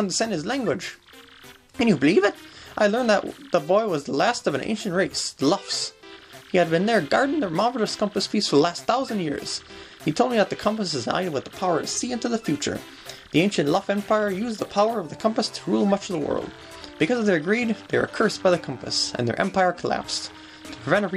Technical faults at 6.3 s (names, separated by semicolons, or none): none